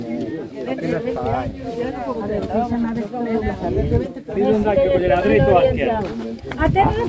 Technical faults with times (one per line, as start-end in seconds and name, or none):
none